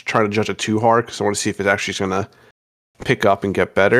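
Speech with hard clipping at 0.15 to 0.21 s, before "to judge it too", at 0.93 s, between that and "because I want to", and from 3.93 s to the end. Overdrive is about 2, 0 and 1 dB: peaks exceeded a stage's range and were cut flat, showing as flattened waveform crests and brief vertical streaks of added harmonics high on a spectrogram.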